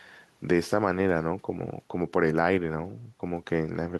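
No technical faults are audible.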